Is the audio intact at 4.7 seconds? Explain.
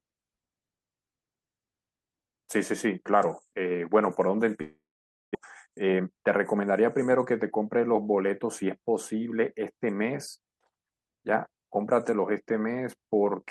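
No. A long network dropout, likely a stall in packet delivery, runs from 4.61 to 5.37 s. The last speech sound smears into a fading buzz, then roughly half a second of silence follows. About 400 ms of speech never returns, and the audio resumes later.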